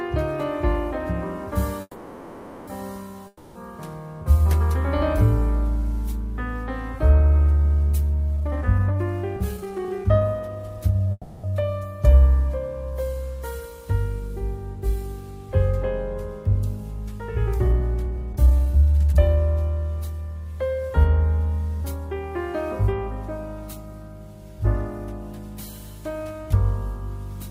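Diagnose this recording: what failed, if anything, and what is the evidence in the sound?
Call audio freeze, at the network and jitter buffer stage: from 1.81 to 2.69 s, and again from 11.12 to 11.46 s, the last sound is stretched into a fading buzz for about 0.86 s and 0.32 s. It then picks up exactly where it stopped, with nothing missing. This was likely caused by packets being held up in transit until the buffer ran empty.

Long network dropout, also at the network stage: from 3.27 to 3.57 s, a fading buzz fills about 0.28 s. Unlike the freezes, when the sound returns it has jumped ahead and that 0.28 s of material is gone. Packets were likely lost, not merely delayed.

Jitter buffer speed-up, at the receiver's buffer: from 8.37 to 11.07 s the audio runs at about 130% speed, dropping roughly 0.7 s. From 17.66 to 19.37 s it runs at about 121%, dropping roughly 0.4 s. The pitch stays the same, which rules out a sample-rate mismatch. 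Short pitch-period pieces were cut to drain the excess delay.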